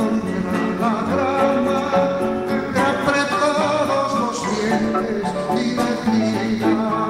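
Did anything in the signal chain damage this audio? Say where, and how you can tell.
No, nothing along the way seems to have harmed this one; I listened closely and found no sign of damage at any stage.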